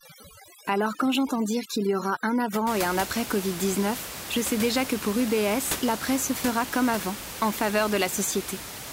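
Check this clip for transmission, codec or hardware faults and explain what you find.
One processing fault is audible: overdone noise removal from 0.00 to 2.67 s. Over that stretch a noise reduction stage is set too aggressively. It cuts individual frequency bands far down or mutes them whenever their level sits near its noise estimate, and the quieter parts of the speech fall below that threshold along with the noise. The background drops and breaks up into twinkling specks. After 2.67 s the room noise returns at about 10 dB below the speech.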